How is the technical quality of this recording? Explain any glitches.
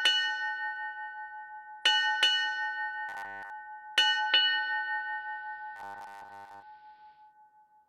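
Two kinds of glitch affect the sound.

From 3.09 to 3.50 s, and again from 5.76 to 6.63 s, there is robotic sound from repeated short buffers. The audio turns into a rigid, metallic 100 Hz buzz. The likely cause is late audio: a 10 ms fragment keeps repeating while most of the real sound is skipped.

From 4.12 to 7.34 s, digital radio blends to analogue AM. A 0.25 s cross-fade swaps in the analogue broadcast. The level shifts by about 1 dB, and faint hiss appears well below the signal.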